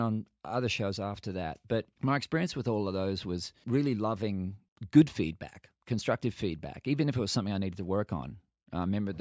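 No technical faults can be heard anywhere in the recording.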